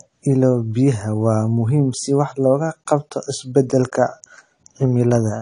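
Throughout, the speech carries plainly audible AAC compression damage: nothing above 10.2 kHz, dull smeared sibilants with a fizzy warble, likely from AAC-LC at a low bitrate near 32 kbps.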